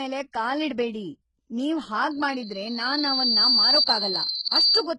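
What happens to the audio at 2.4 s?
Just after "ಕಾಲಿಡ್ಬೇಡಿ ನೀವ್", a loudspeaker feedback squeal runs from 2.11 to 4.88 s. The microphone is picking up its own loudspeaker, and the loop gain exceeds one at 4.3 kHz. That single tone swells over about a second and a half into a squeal roughly 10 dB above the speech.

Heavy codec damage is also present, with nothing above 15.4 kHz. The likely cause is HE-AAC compression at a bitrate that sounds around 12 kbps. The treble is rebuilt by copying lower bands upward, so its harmonics misalign and s sounds come out gritty, metallic or lispy.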